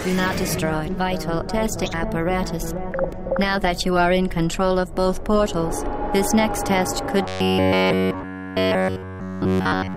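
From 7.22 s to 9.96 s the sound becomes a rigid metallic buzz at 93.8 Hz, robotic sound likely from repeating a roughly 10.7 ms buffer throughout.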